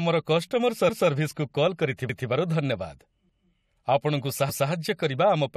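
The speech was handled in chunks of about 1.0 s, and at 2.09 s one chunk began before the previous one had finished, so the join overlapped. The final 200 ms of audio before the join was played a second time, from 2.09 to 2.29 s. This overlapping chunks fault is heard as a brief stutter, as the speech jumps back and replays itself before moving on.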